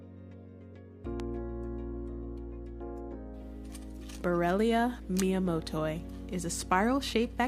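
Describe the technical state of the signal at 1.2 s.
At 1.20 to 1.22 s there is a single loud pop, a sharp click-thump sitting on top of the sound, which continues unbroken beneath it. A likely cause is a sudden voltage step or pulse, such as from a plug, a switch or static, that was shaped by later circuitry. On the waveform it shows as a narrow spike standing around 10 dB above the surrounding level. On a spectrogram it appears as a thin vertical stripe spanning the full frequency range.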